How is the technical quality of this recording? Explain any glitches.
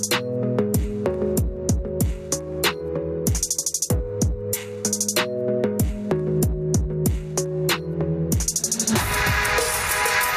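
The recording suffers from gain pumping that runs through the whole clip. The level swings by around 10 dB. Loud and soft moments sit unnaturally close together, and the sound feels squashed. The likely cause is input gain set far too high, with a fast limiter or compressor clamping down whenever the signal peaks. It releases again in the quiet spaces.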